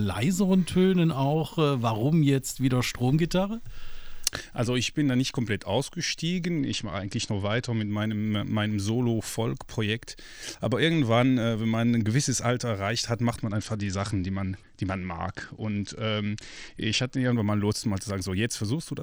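Right through the clip there's a block size mismatch with truncation: each block loses its tail, giving a steady 43.1 Hz buzz that fits 1024-sample blocks, with no audible speed-up. From 6.59 to 7.91 s and again from 13.41 to 17.32 s, a Bluetooth SBC bit pool drop dulls the treble and adds grit, consistent with the bit pool falling from 31 to 10, near 77 kbps.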